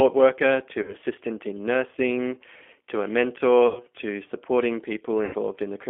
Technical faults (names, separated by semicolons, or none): G.729 codec; VoIP packet loss concealed by the speech codec